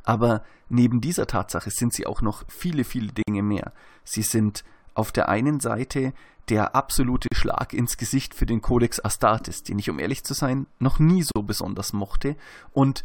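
At 3.23 s after "auch noch viele viele", 7.28 s after "der absolute" and 11.32 s after "zu sein noch nie", the speech drops out for about 51, 40 and 40 ms. These are gaps at joins of encoded pieces, spaced every 4 s: separately encoded chunks were spliced without trimming the encoder's lead-in and end padding, leaving short holes with smeared edges before the speech resumes.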